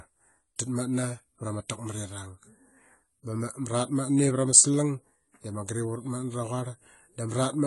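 From start to finish the speech sounds dull and smeared, with a fizzy, warbling edge on sibilants and nothing above about 11.5 kHz. This is likely AAC compression, with the plainly audible codec damage pointing to AAC-LC at a low bitrate near 32 kbps.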